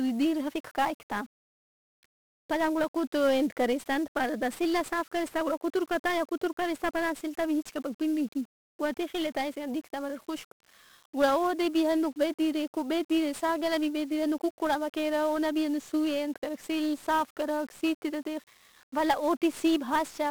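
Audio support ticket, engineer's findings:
Heavy fuzz and crackle across the whole speech clip, start to end. Broadband hiss sits over the voice; treble is buried. Probable component: encoder stage. Fault: 1-bit DFPWM compression. Each sample carries a single bit, nudging an adaptive level up or down, so quantisation noise is large and spread across the band. Damage is heavy throughout, which fits a low-rate stream of around 48 kbps. Check codec selection in the pipeline.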